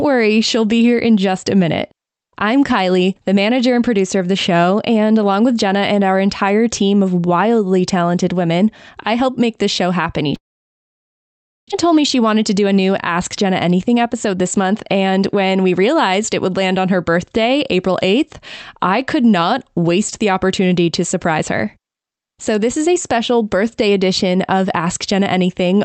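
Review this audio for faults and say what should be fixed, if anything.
From 10.35 to 11.73 s the speech collapses into a fading buzz or hiss, then near silence, and resumes with about a second of sound missing. This is likely a long network dropout: packets stopped arriving, the receiver stretched the last audio, then concealment gave out and left quiet.

From 11.84 to 15.98 s the speech runs hurried at unchanged pitch, roughly 107% speed. This is a jitter buffer speed-up: the buffer had filled beyond its target after the late packets arrived together, so the receiver trimmed short pitch-period pieces, about 0.3 s in total.

Both would be prevented by fixing the network path that stalled delivery, and setting the jitter buffer to drain more gradually after a burst.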